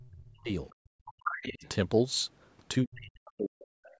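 From the first instant to 0.49 s the talker's voice sinks very deeply, by something like 40 dB. That is speech suppressed in double talk: both sides were talking, and the echo canceller, likely unable to tell its own talker from the loudspeaker echo, pulled everything down. In the same stretch, faint fragments of a second voice surface from 0.00 to 0.07 s and from 0.28 to 0.32 s, far below the talker, around 30 dB down. This is the other side's voice leaking through, likely loudspeaker sound that the canceller did not fully remove from the microphone.

From 0.77 to 1.2 s the room sound drops away almost completely, about 37 dB, for roughly 400 ms, then returns. That is background gated by the echo canceller, which clamped the microphone hard while the loudspeaker was playing and released it afterwards.

From 1.05 to 1.69 s the leaked voice becomes much more prominent, only about 10 dB under the talker. 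Within it, from 1.48 to 1.64 s, the talker dips again, more mildly, around 15 dB.

The longest suppression runs from 2.83 to 3.93 s. For about a second the voice is pushed down deeply, roughly 40 dB. A last faint scrap of the other side appears from 3.85 to 3.96 s.

The call's microphone processing leaves nothing above 8 kHz.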